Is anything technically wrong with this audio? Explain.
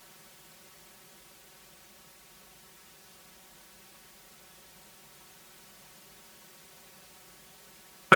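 Yes. Throughout the speech there is channel delay (comb filtering): one channel lags by around 5 ms, so summing cancels evenly spaced frequencies from roughly 100 Hz, sounding hollow. Unlike flanging, these notches never move.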